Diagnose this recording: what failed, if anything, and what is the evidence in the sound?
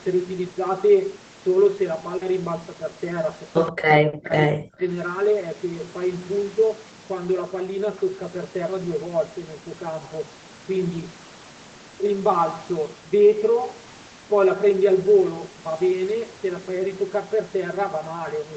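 Channel delay (comb filtering) runs through the whole recording, in the analogue wiring or the driver stage where two channels were summed. The speech sounds hollow and phasey. One channel trails the other by roughly 5 ms, so the shared content cancels at a first notch near 100 Hz and then at evenly spaced intervals of about 200 Hz. On a spectrogram this appears as fixed horizontal dark bands that stay put regardless of what is being said.

Short concealed packet loss occurs at the network and jitter-buffer stage, from 2.17 to 2.23 s. About 40 ms of audio never arrived, and the decoder covered the gap by extending the preceding sound before crossfading back into the real signal. It comes across as a brief smear. On the spectrogram that stretch looks smeared, with a slight seam where real audio resumes. The speech is band-limited to 8 kHz throughout by the Opus call path.

An echo leak appears at 3.67 to 3.72 s in the call processing: a faint, delayed copy of the speech about 127 ms behind the original and roughly 15 dB quieter. 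This is likely a far-end loudspeaker whose echo canceller let some of its microphone pickup through. In the waveform it shows as a small trailing echo burst, and on the spectrogram as a dim, time-shifted replica of the preceding harmonic pattern.

Speech suppressed in double talk follows immediately, from 3.72 to 4.84 s, also in the call processing. For roughly a second the level drops in chunks, at its deepest by around 40 dB, so the speech ducks and partly cuts out. The likely cause is an echo canceller confused by simultaneous talk that attenuated everything. The waveform envelope collapses in uneven pieces, and the spectrogram shows the energy, especially the upper bands, fading out.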